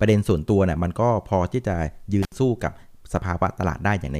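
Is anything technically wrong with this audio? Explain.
Yes. From 2.23 to 2.34 s there is an intermittent contact: a loose plug or cable connection briefly breaks the signal path, opening for about 69 ms. The speech drops out abruptly, with crackle where contact breaks and returns and faint hiss in the gap.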